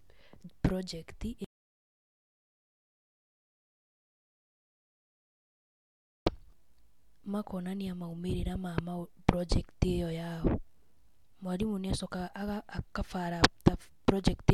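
An audio dropout to silence runs from 1.44 to 6.27 s in this speech recording, cutting the sound off mid-flow for about 4.8 s of silence with no room tone. The input was likely lost, through a disconnected device, failed link or stray mute, while recording continued writing silence, so that stretch of speech is gone.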